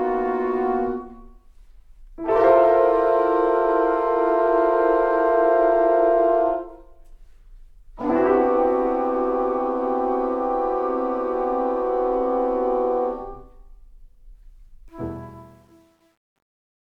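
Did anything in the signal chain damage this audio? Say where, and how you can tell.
Yes. The fade-out that begins around 15 s suffers truncation distortion on a fade, introduced at a digital gain or sample-format conversion stage. From 14.89 s the tail turns grainy, and from 15.41 s to the end at 17.0 s it is at its grittiest. The fade was rendered at too few bits without dither, which fits roughly a 10-bit word, so the quietest levels collapse into a few coarse steps.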